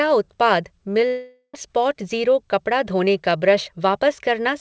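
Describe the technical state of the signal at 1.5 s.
At 1.5 s the signal is inside a long network dropout running from 1.07 to 1.55 s. The last received sound is stretched into a buzzy, fading fill for about 466 ms, ending in roughly 70 ms of silence, and about 300 ms of the original audio never returns. The likely cause is a gap in arriving packets that the receiver concealed, after which playback resumes with the timing shifted by around 150 ms.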